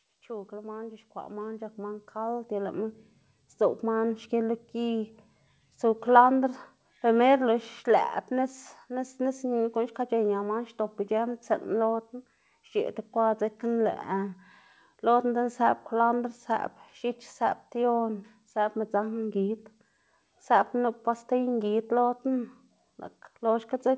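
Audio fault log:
0.27–4.59 s, automatic gain rising: the level creeps up by about 15 dB over roughly four seconds, and the background comes up right along with the speech, so it's the whole signal swelling rather than the talker getting louder. That's the gain control deciding the input was too quiet and nudging its gain up step by step until it settled. The 8 kHz ceiling you'll hear comes from the G.722 call path, not from this.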